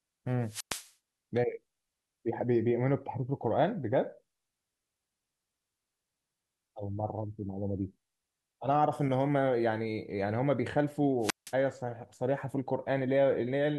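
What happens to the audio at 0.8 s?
The radio link of an analogue FM wireless microphone faded, so the receiver's squelch cut the output: a wireless microphone squelch dropout from 0.42 to 0.93 s. Hiss rises, the speech drops into a hole of near silence lasting about 109 ms, then returns.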